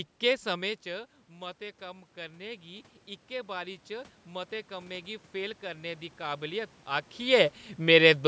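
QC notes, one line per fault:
0.47–6.8 s, automatic gain rising: near 0.5 s the level reaching the microphone drops by about 14 dB as the talker moves back. The automatic gain control answers by slowly lifting its gain by about 10 dB over roughly six seconds, so the voice and the room noise swell together. On the waveform the speech envelope and the noise floor climb steadily together. On the spectrogram the background band brightens along with the voice, with nothing above 8 kHz.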